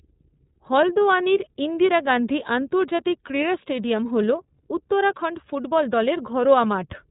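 A speech recording that has passed through the iLBC codec for its whole length. Nothing survives above about 3.8 kHz, and the voice has a plainly audible rough, slightly synthetic grain. A plain narrowband telephone line would sound band-limited but clean. Here, each frame's excitation is coded on its own with no carry-over from the previous one, which gives that buzzy texture. The coarseness fits iLBC's 30 ms frame mode.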